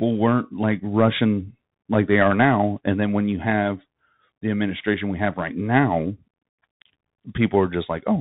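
The speech passes through a Bluetooth CVSD headset codec for the whole clip. It is a narrowband codec, so nothing above 4 kHz survives; loud bright passages outrun its one-bit slope coding and distort, s sounds turn scratchy, and granular hiss sits underneath, consistent with a 64 kbps headset link.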